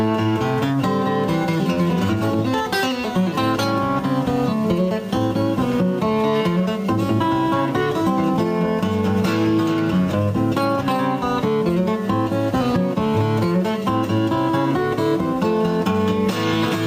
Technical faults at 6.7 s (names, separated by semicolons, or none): gain pumping